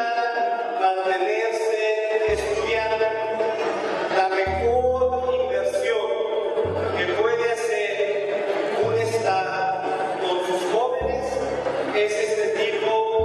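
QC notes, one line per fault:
No faults found.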